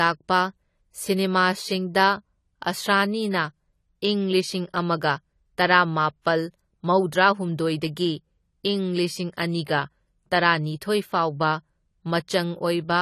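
Throughout, the speech stops at 14 kHz and sibilants fizz and warble: likely AAC compression at a low bitrate near 32 kbps, unlike plain filtering, which wouldn't warble.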